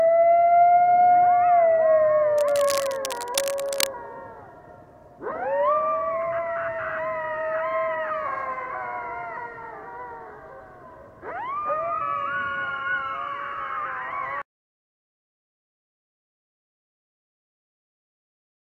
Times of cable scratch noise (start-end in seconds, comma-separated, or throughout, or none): 2.38-3.87